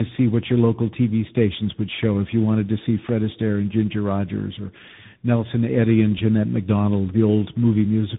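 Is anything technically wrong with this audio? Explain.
Yes, there's tandem speech coding running through the whole clip. The speech sounds like it crossed two separate speech codecs back to back, most plausibly a low-rate AMR-style coder and then a CVSD stage, with a plain telephone-grade link between them. Each codec re-encodes the previous one's already damaged output, so the errors pile up. The result is rough, muffled and warbly, with nothing above 3.8 kHz.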